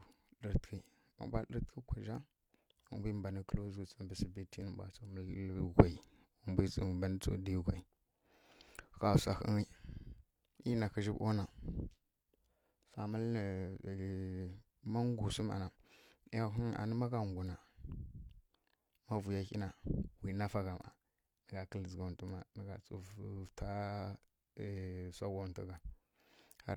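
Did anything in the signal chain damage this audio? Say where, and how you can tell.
No, nothing in this recording stood out as damage from any stage of the chain on listening.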